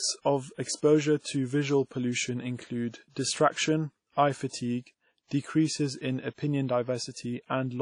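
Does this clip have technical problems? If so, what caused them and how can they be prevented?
Yes. Throughout the speech there is a ringing, washy quality with a hiss that swells and fades along with the signal, likely from WMA compression at a low bitrate, around 32 kbps. Its long transform blocks smear quantisation noise over tens of milliseconds and zero out weak components. On a spectrogram, everything above about 10.1 kHz is cut off flat, with holes and smeared blotches where weaker detail was dropped. Encoding at a higher bitrate with a modern codec would avoid this.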